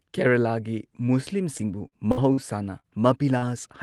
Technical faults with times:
1.57-2.39 repeated packet loss (robotic sound)
2.79-2.86 short concealed packet loss
3.38-3.44 short concealed packet loss

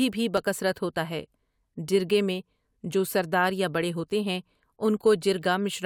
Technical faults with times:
0.37-4.97 clock drift buffer slips

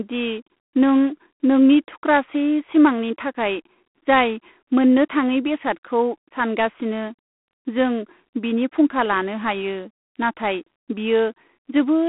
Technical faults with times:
0.00-12.09 G.726 ADPCM

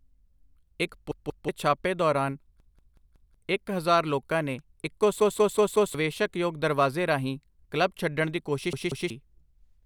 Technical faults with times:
1.11-1.49 repeated buffer
2.60-3.34 repeated buffer
5.20-5.94 repeated buffer
8.73-9.10 repeated buffer

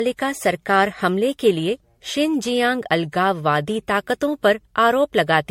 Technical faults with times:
0.00-5.50 generation loss

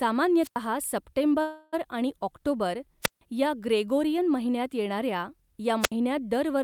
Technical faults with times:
0.42-0.56 wireless microphone squelch dropout
1.41-1.75 call audio freeze
3.02-3.21 wireless microphone squelch dropout
5.81-5.92 wireless microphone squelch dropout

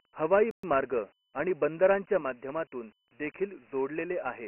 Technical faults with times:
0.00-4.47 Dialogic VOX ADPCM
0.51-0.63 playback stall

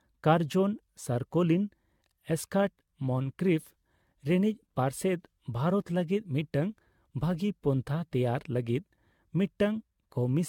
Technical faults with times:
0.00-10.48 generation loss

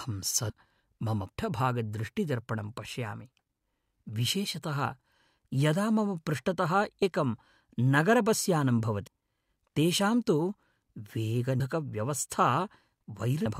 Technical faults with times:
0.49 compressed frames skipped
7.02 compressed frames skipped
9.07 compressed frames skipped
11.60 compressed frames skipped
13.45 compressed frames skipped

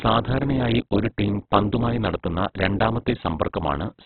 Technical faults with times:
0.00-4.05 Opus compression

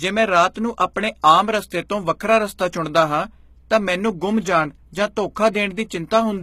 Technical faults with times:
0.00-6.43 HE-AAC compression
0.54-0.56 pre-echo

